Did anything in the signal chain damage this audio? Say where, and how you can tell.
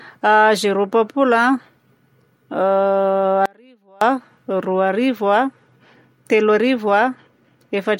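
Yes. From 3.46 to 4.01 s the speech drops out for about 0.56 s, leaving only a faint residue roughly 30 dB below the normal level. This is an audio dropout to a faint residue, most likely an intermittent break early in the analogue wiring while the stages after it stayed live. The clean cut and return rule out a natural pause or fade. The remaining leak, not digital silence, separates it from a buffer or network gap.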